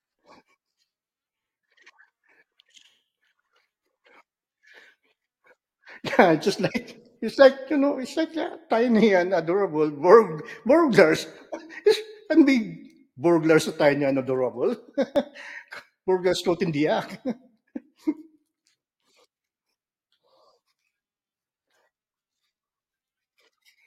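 At 15.16 s there is an overlap between stream segments: two consecutive chunks of the stream, each apparently about 4.0 s long, carry time stamps that claim the same stretch of time. The player trims the supposed duplicate, but that audio was never actually repeated, so roughly 13 ms of genuine speech is discarded and the waveform jumps straight across the gap. The result is a tiny skip in the speech.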